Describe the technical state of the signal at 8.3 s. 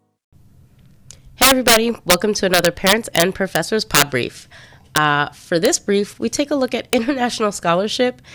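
At 8.3 s the speech signal is intact, with no audible technical fault at that moment.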